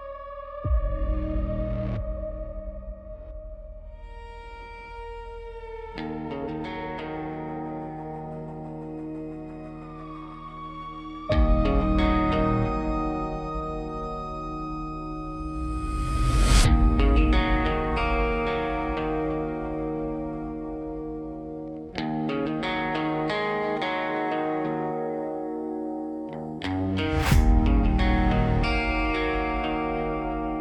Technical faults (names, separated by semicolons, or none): none